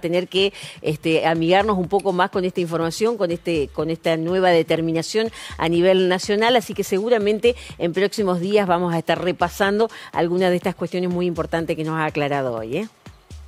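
There are no technical faults to describe in time order here.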